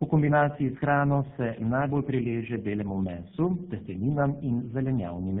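Throughout the clip the speech shows tandem speech coding. It sounds rough, muffled and warbly, with nothing above 3.8 kHz. That fits three low-rate speech codecs in a row, ending in GSM full rate, each re-coding the previous one's already degraded output.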